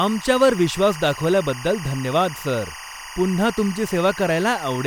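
Timecode bleed runs throughout the speech. A 23.976 frames-per-second timecode leaks in, warbling between roughly 1 and 2 kHz, about 15 dB below the speech.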